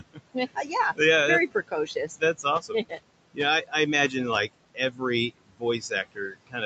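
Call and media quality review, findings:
Noise suppressor artifacts, throughout. Room noise, about 16 dB under speech, pulled down by about 21 dB between phrases, returning underneath speech. Suppressor attenuating bands judged steady noise, frame by frame, so the background pumps with speech activity.

Speech cut by the noise suppressor at 0.00–0.99 s, 1.52–2.99 s, 3.34–3.73 s, 4.48–5.02 s and 5.46 s to end. Quiet speech misread as noise and attenuated with the background, up to about 12–22 dB. Soft consonants and endings sound swallowed.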